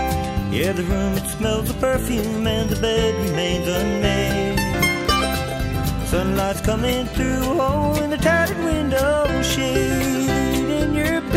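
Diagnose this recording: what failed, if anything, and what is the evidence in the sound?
A feedback whistle sits in the sound from 2.50 to 4.52 s: a thin, steady tone at 5.6 kHz, well below the main sound, swelling and fading slowly in level before it stops. The likely cause lies at the acoustic and analogue front end, where loudspeaker output leaks back into the microphone with loop gain just short of runaway, so one frequency rings on without building. On a spectrogram it shows as a narrow horizontal line at 5.6 kHz across those two seconds.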